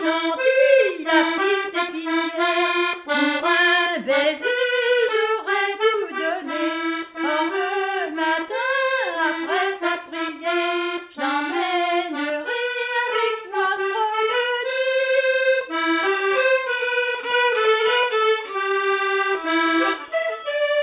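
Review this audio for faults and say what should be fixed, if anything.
Nothing here needs fixing; the signal holds steady and continuous throughout, with no audible technical problems to correct.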